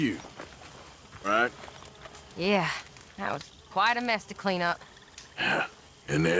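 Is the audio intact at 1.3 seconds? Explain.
No. A skip ahead at 1.24 to 1.26 s drops around 0.4 s of audio that was already queued, likely through jitter-buffer overflow. Playback jumps straight forward with no gap filled, so the sound just before 1.3 s splices abruptly onto later material.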